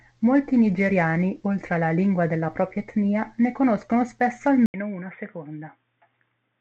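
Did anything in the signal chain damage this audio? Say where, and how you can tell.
Yes. At 4.66 s, right after "etnia ne conoscono spesso", an 80 ms gap precedes duller, roughly 5 dB quieter sound cut off above 3.6 kHz, with a faint new noise floor. The likely cause is an input switched to a poorer device at the driver stage. On a spectrogram, the energy above 3.6 kHz vanishes after a brief blank column.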